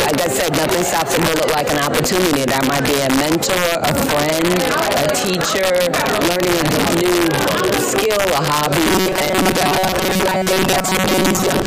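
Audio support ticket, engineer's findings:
Integer overflow, present throughout. Loudest peaks crack violently instead of flattening: gain pushes them about 1 dB past full scale, and only a small fraction of samples wrap to the opposite sign. Suspect the gain/mix stage, an unsaturated integer sum. Distinct from clipping: that flattens peaks, while this snaps across the full range, far sharper.

Robotic sound from repeated short buffers, 8.86 s to end of clip (11.66 s). Rigid metallic buzz at 188 Hz, still loosely tracking the sound's contour. Likely cause: buffer underrun, with the player looping the last block, which fits a buffer of roughly 5.3 ms. About half the audio is replaced by repeats. Unlike jitter or dropouts, the pitch stays fixed, set by the block length.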